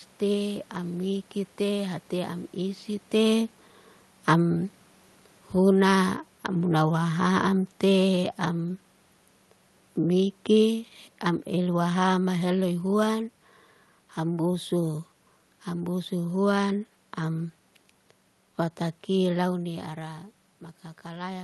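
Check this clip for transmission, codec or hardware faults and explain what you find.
One fault stands out, a gain problem rather than a codec or hardware failure. From 3.14 s to 8.29 s the speech sinks steadily by about 5 dB, and the room noise behind it drops by the same amount, so the whole signal is turned down, not just the talker. This is automatic gain falling: the automatic gain control judged the input too loud or its background noise too strong and lowered its gain gradually over those five seconds. The talker also shifts position around 3 s, which adds a level change just as the ride begins. The call path's upper limit near 12 kHz and its coding noise fit an Opus link at a modest bitrate.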